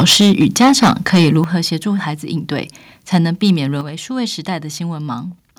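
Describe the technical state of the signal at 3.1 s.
Around 3.1 s the speech shows microphone overload, running from 3.14 to 3.17 s. The loudest part of the waveform is flattened, with its tops cut off, which gives a crackling edge to that brief stretch. The likely cause is an input gain set too high, driving the signal about 2 dB past the converter's ceiling so that roughly 7 percent of the samples in that span are clipped.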